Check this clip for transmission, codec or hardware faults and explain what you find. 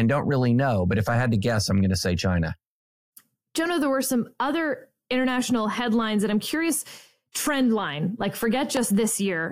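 One hardware fault is present. A loud pop at 8.77–8.80 s sits about 15 dB above the speech, most likely a voltage step from a plug, switch or static discharge, with the speech continuing underneath.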